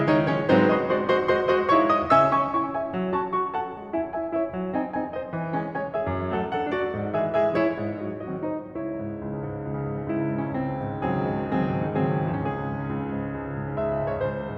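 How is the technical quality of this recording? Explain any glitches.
No technical faults are audible in this music.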